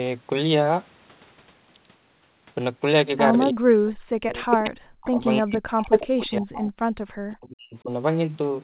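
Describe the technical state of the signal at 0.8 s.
At 0.8 s the speech is intact, with no fault at that moment, only the narrow telephone-band sound of a G.711 mu-law call path with nothing above 4 kHz.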